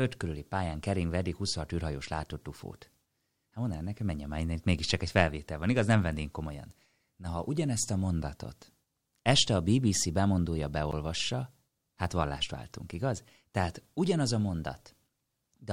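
At 10.91 s, a block of digital silence about 12 ms long, which fits a 512-sample buffer left unfilled, cuts to silence with no fade, giving a tick rather than a soft dropout.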